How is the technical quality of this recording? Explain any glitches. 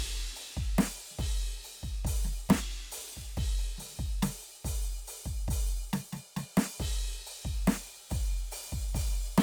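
From 7.54 s to the end, the music picks up crude rate conversion. Samples seem to be repeated rather than filtered, which fits a 44.1 kHz to 48 kHz change. The repeating error, only about 25 dB down, adds a gritty, inharmonic fizz riding on loud, bright passages.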